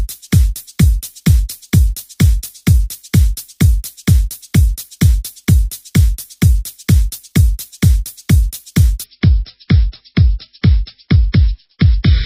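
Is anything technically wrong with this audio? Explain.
Yes. From 9.04 s to the end, the adaptive stream drops to a lower bitrate, likely around 24 kbit/s MP3 instead of 128. Treble vanishes above 5.5 kHz and artefacts rise abruptly, without a gap.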